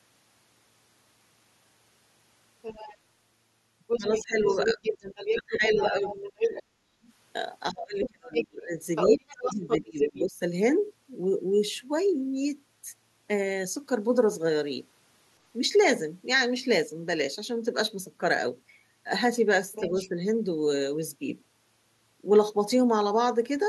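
A speech recording in which the far end of the call can be heard. There is other side's voice leaking through at 2.62 to 2.97 s and 19.72 to 20.09 s, about 15 dB under the talker, and over longer stretches at 3.87 to 6.63 s, about 5 dB under, and 8.0 to 10.22 s, where it is roughly as loud as the talker. The likely cause is a loudspeaker feeding the microphone with an echo canceller that leaves residual far-end signal in the send path. In the overlapping regions, 3.98 to 7.08 s and 7.72 to 10.39 s, the talker's speech is suppressed in double talk: the near voice ducks in pieces by up to about 30 dB, adding up to roughly one and a half seconds in the first span and two seconds in the second. This is likely the canceller's suppressor failing to separate the local talker from the echo while both sides speak, and attenuating everything together.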